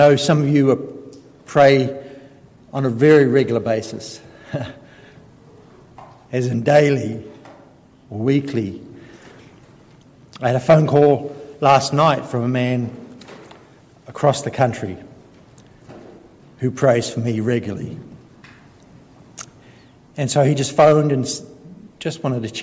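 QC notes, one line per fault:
No faults heard anywhere in this clip.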